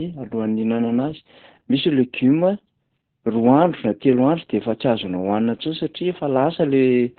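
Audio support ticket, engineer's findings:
Opus voice compression, entire speech clip. Muffled, hoarse, slightly robotic voice; nothing above 4.3 kHz. Probable component: Opus encoder in SILK-only narrowband mode, at a bitrate that fits about 8 kbps with 20 ms frames. Mechanism: band cut to narrowband plus coarsely coded linear-prediction excitation, heavy damage. Distinguishing point vs. plain low-pass or telephone filtering: a filter only dulls; here the voice itself is grainy and buzzy, which comes from the starved excitation, not from the band limit.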